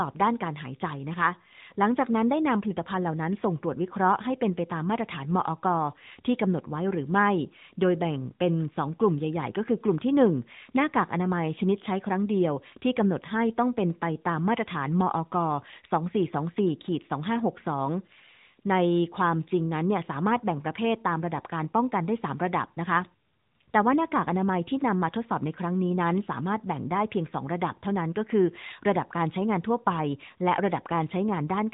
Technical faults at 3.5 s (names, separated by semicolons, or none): AMR narrowband mobile codec